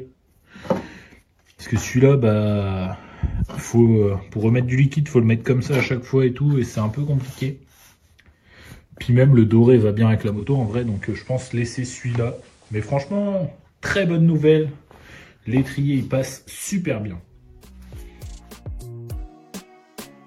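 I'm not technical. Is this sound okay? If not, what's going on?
No. From about 10.21 s to 13.37 s the sound gets a little quieter and picks up a quiet background hiss, then returns to normal. Each change fades over about a third of a second. This is digital radio blending to analogue: the radio briefly lost its digital signal and slid over to the ordinary FM broadcast of the same station, which carries that hiss, before switching back once the digital signal returned.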